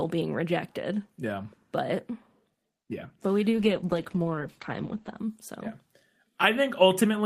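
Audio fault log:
3.55–5.29 s, call bitrate drop. The speech turns muffled and rough, with a watery, smeared texture. High frequencies vanish above 8 kHz, down from 20 kHz before. This is the encoder coding far more coarsely after the call's bandwidth estimate fell. The loss of detail fits a drop from 32 kbps to about 11 kbps. The worst stretch lasts about 1.7 s. Clarity returns once the bitrate recovers.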